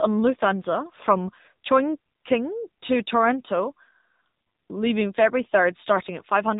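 Throughout, the speech carries AMR narrowband mobile codec damage: nothing above 4 kHz survives, and the voice is plainly buzzy and synthetic, which points to a low mode near 7.4 kbps. Unlike a simple low-pass filter, the voice itself sounds modelled and rebuilt, not merely dulled.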